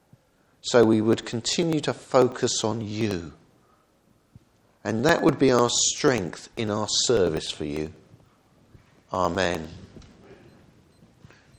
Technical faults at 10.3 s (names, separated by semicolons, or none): periodic USB or driver dropouts